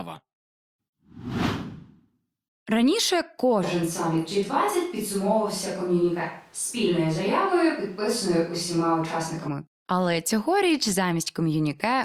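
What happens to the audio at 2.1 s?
Nothing goes wrong at 2.1 s; the speech continues intact through that moment, with no dropout, click or distortion.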